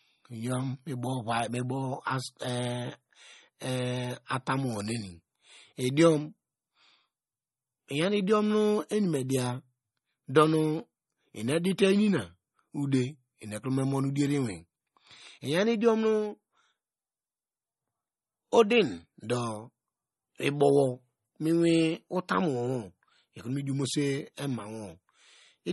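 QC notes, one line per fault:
throughout, MP3 compression: plainly audible watery, swirly speech with nothing above 11.8 kHz, likely MP3 encoding starved of bits, which fits 32 kbps.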